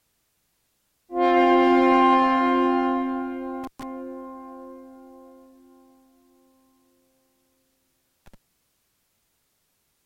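A loose cable or plug in the signal chain briefly loses contact twice, an intermittent contact fault. The first break falls between 3.64 and 3.83 s, with the line open for about 122 ms; the second between 8.26 and 8.34 s, open for 59 ms. Each time the circuit opens the audio drops out abruptly, with crackle at the moments the connection breaks and remakes, and faint hiss fills the gap.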